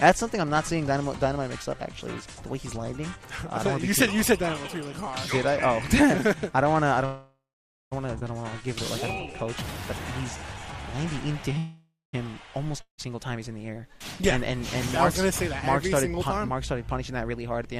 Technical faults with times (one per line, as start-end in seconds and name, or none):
7.05-7.93 call audio freeze
8.19-8.23 skip ahead
8.43-9.55 jitter buffer slow-down
10.37-11.54 jitter buffer slow-down
11.58-12.15 call audio freeze
12.81-13.00 long network dropout
14.56-16.28 jitter buffer speed-up